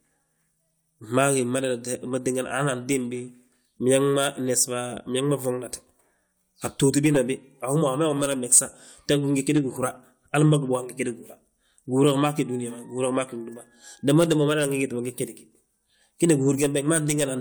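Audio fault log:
No faults detected; the speech runs without audible defects.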